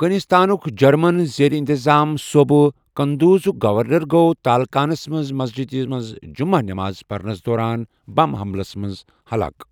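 No technical faults can be heard anywhere in the speech.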